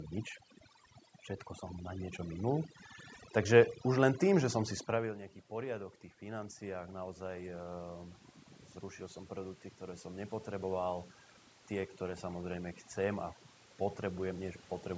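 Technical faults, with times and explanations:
Throughout, overdone noise removal: the noise suppressor is set so aggressively that frequency bands near its noise estimate are pulled to nothing, taking quiet parts of the speech with them. The background becomes near-silent with twinkling specks. A spectrogram shows scattered isolated dots between phrases and holes eaten into the speech harmonics.
4.99–7.58 s, automatic gain rising: just after "tým že som si", the talker moves around 5 s and the input falls by about 14 dB. The gain control slowly climbs about 5 dB to compensate, so voice and background swell together. The waveform envelope rises gradually over about 2.6 s.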